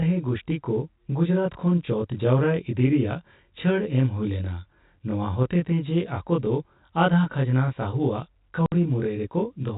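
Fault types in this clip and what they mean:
Channel delay (comb filtering): one channel arrives roughly 20 ms behind the other, and summing them cancels shared content at evenly spaced frequencies starting near 20 Hz. The speech sounds rough or slightly doubled throughout, and a spectrogram shows closely packed, fixed horizontal notch stripes.
Packet loss filled with silence: from 8.66 to 8.72 s, 60 ms of audio drops to digital silence, which fits three lost packets of 20 ms each. The waveform shows a flat gap with abrupt edges, and the spectrogram shows a clean vertical blank band.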